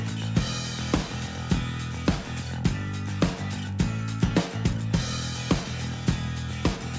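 No technical faults are audible.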